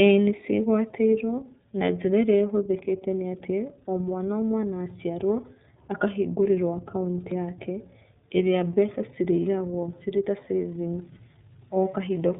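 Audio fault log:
throughout: iLBC codec. The audio passed through the iLBC narrowband codec, which codes each 30 ms frame's excitation independently of the previous frame. Nothing above 3.8 kHz survives, so the speech sounds muffled and telephone-like, with no crisp sibilance. The codec damage is plainly audible: the speech stays clear but sounds rough and slightly synthetic, with a grainy, buzzy texture consistent with iLBC's lower rate of about 13.3 kbps.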